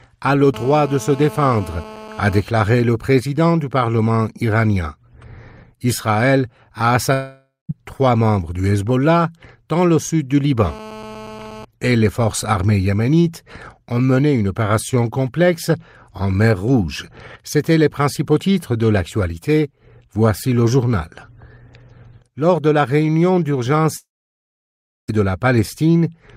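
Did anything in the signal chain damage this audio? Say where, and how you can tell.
Yes. Analogue wiring picked up GSM phone buzz at 0.54–2.40 s and 10.64–11.65 s: a steady, raspy 217 Hz rasp, about 17 dB down, rich in harmonics, unlike 50/60 Hz mains hum.

A long network dropout is likely at 7.13–7.71 s and 23.97–25.10 s. Fading fill then silence, about 1 s in the second, and the sound resumes with roughly 0.56 s and 1.12 s missing. That is far longer than brief packet-loss glitches.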